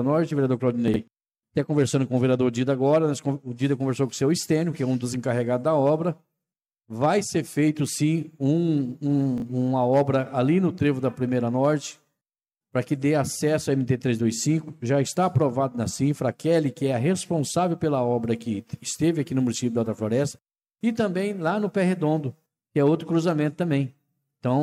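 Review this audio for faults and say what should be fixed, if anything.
Chunks out of order occur at 0.88 to 0.96 s and again at 9.38 to 9.42 s. At each point a short block of audio, which fits 20 ms chunks, plays after material that should follow it. The first points to a chunk about three places late, the second to one place late. Each produces a brief jumbled moment with three hard joins. Unlike a dropout, nothing goes silent or missing. Unlike a stutter, no segment is repeated. The same audio is simply rearranged.

To prevent it, reorder chunks by sequence number in a jitter buffer before writing or playback, rather than handling them in arrival order.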